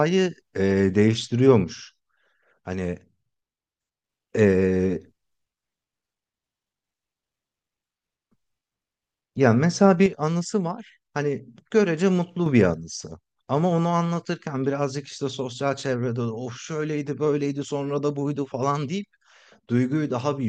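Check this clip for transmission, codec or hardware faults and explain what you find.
The speech shows a recurring level fault consistent with one channel dropping out. The speech falls abruptly by about 6 dB from 1.64 to 4.04 s, from 10.06 to 12.46 s, and from 12.74 s to the end, recovering only briefly between the last two. The likely cause is one stereo channel going silent before a mono fold-down: the material shared by both channels loses half its contribution, so the sound turns suddenly quieter at each onset.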